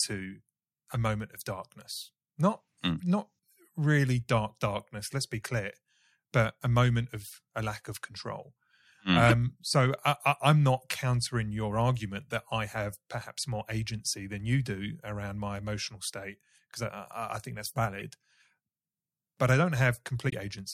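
At 0.95, 9.26–9.33 s (just before "so I am not", loudest, near -5 dBFS), 12.27–12.31 s (between "not countering your argument" and "that I have perhaps") and 18.00 s (after "I think that's"), a corrupt frame decoded gives short chirps, squeaks, blips or bursts of noise: misread bits misplace energy, seen as brief off-pattern spectrogram smears. At 20.26–20.33 s compressed frames skipped drop about 30 ms, heard as a sudden jump; the waveform jumps ahead.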